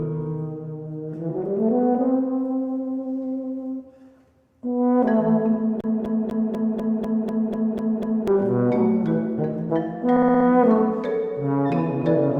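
From 5.81 to 8.28 s the CD is stuck on one turn: a 0.25 s slice repeats ten times. Each laser jump leaves a brief mute, visible as evenly spaced waveform gaps. At 10.16 to 10.46 s repeated frames make a stutter. One 60 ms block plays five extra times, adding 0.3 s, shown as identical tiled spectrogram columns.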